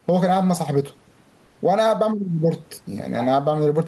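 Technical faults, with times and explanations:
Throughout: gain pumping. The level swings by roughly 10 dB. Loud and soft passages sit close together and sound squashed. The likely cause is gain set too high, with a fast limiter or compressor pulling it down.
1.45 to 1.69 s: short stall from a late packet. A sound is held for about 90 ms with a slight buzz or dip, then the speech carries on from where it stopped. A packet arrived late, the jitter buffer ran dry, and the receiver stretched the last audio to bridge the gap. Nothing is lost.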